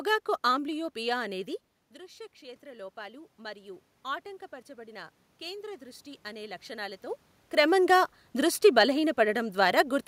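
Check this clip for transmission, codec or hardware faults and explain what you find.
Two stretches of automatic gain rising stand out. From 1.29 to 3.88 s, and again from 4.74 to 7.09 s just before "క్రమంగా దృష్టి", speech and room noise swell together over a couple of seconds. After the input dropped about 16 dB, the gain control slowly lifted its level, by about 5 dB and then about 4 dB.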